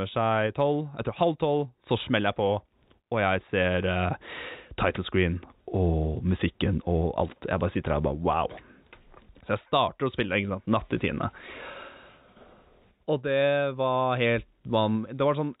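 No technical faults can be heard in the speech. It has come through a call path whose narrow band stops at about 4 kHz, which fits G.711 mu-law at 64 kbps.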